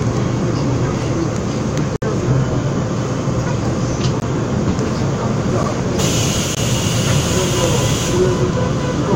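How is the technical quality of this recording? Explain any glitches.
There are four dropouts, each a block of digital silence, likely from the program not filling the output buffer in time, at 1.96 s (60 ms), 4.2 s (20 ms), 5.63 s (about 8 ms) and 6.55 s (20 ms). The sound drops straight to silence and back with no fade. The 8 ms one ticks, and the 60 ms one is an audible hole.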